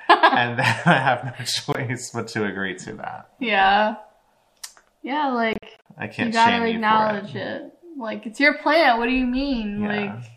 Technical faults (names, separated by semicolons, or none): Bluetooth dropout